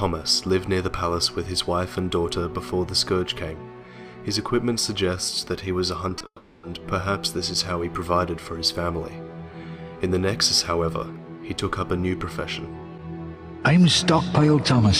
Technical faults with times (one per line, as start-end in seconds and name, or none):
6.09-6.26 repeated packet loss (robotic sound)
6.26-6.64 long network dropout